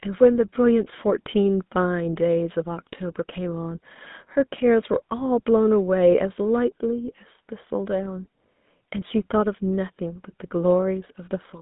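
From start to finish the speech carries GSM full-rate codec damage, plainly audible. The codec models the vocal tract and excites it with a sparse, regularly spaced pulse train, which fits a 13 kbps full-rate stream. Fine excitation detail is lost, leaving a buzzy, gravelly roughness. On a spectrogram, energy sits between 150 Hz and 3.7 kHz with nothing above 3.8 kHz. Harmonics look smeared and grainy, and the waveform looks coarse and pulse-like.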